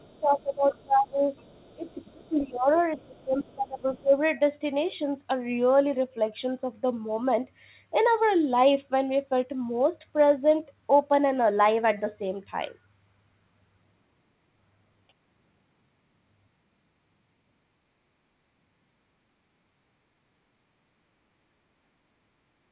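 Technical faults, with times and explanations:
0.00–1.24 s and 1.74–4.14 s, speech suppressed in double talk: the speech dips by up to about 20 dB for roughly 1 s and then 1.5 s, likely because the echo canceller mistook overlapping talk for echo.
0.08–1.93 s and 2.75–3.55 s, other side's voice leaking through: a faint second voice sits about 35 dB below the speech, then about 20 dB below. This is likely residual loudspeaker echo the canceller failed to remove.
19.35–19.53 s, background gated by the echo canceller: the room sound drops by about 19 dB for around 150 ms while the canceller clamps the microphone, then recovers.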